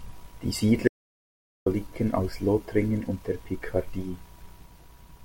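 At 0.88 s the speech cuts off abruptly and the track drops to silence until 1.66 s, when it resumes mid-flow. This is an audio dropout to silence, with roughly 0.78 s of material lost, likely because the input was briefly disconnected or muted while recording continued. Unlike a noise gate or heavy noise reduction, the gap has no fade and no trace of room tone.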